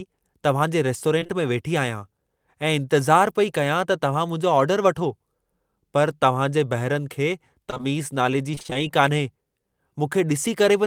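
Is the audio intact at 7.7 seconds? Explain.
No. Short concealed packet loss strikes three times, at 7.70, 7.74–7.89 and 7.78 s, just before "नाले जी". Each time about 20 ms never arrived, and the receiver extended the preceding sound and then blended back. About 15 ms of extra time is added here. It sounds like a brief smear or wobble. On a spectrogram, harmonics stretch unnaturally flat or blur into noise, and the waveform shows repeated cycles.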